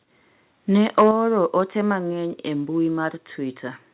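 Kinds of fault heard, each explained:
Microphone overload: Between 0.98 and 1.09 s the loudest peaks get their tops flattened, adding a harsh crackle. The input was likely set too hot, pushing peaks about 4 dB past the converter's ceiling, so a small share of samples got squared off.
Microphone volume stepped down: Right after that crackle, at 1.11 s, the whole level drops by about 5 dB in one step, background included, then again by about 2 dB at 2.13 s, just before "e mbui". That's likely the call software turning down the input gain.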